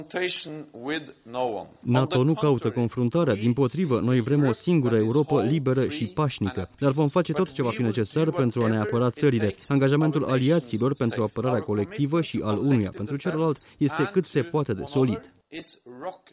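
No technical fault can be heard in this audio. Nothing in it points to a problem in how the sound was captured, carried or played back.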